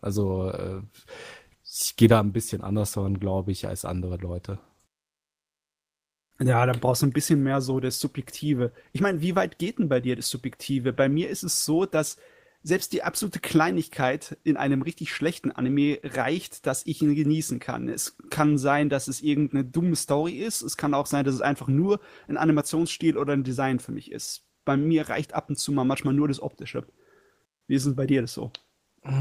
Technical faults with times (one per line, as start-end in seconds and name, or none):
none